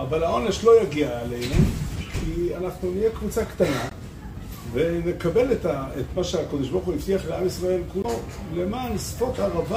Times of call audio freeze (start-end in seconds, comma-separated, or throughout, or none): none